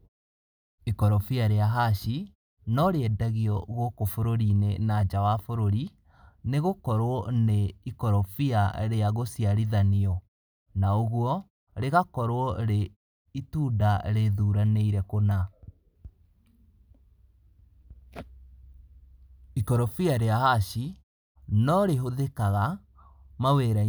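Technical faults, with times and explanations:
No technical faults can be heard in this speech recording.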